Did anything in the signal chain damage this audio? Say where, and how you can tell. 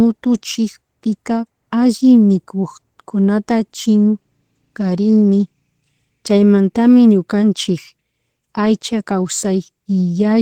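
No, nothing along the way seems to have left a mark on this speech recording, so there's no stage to point at here.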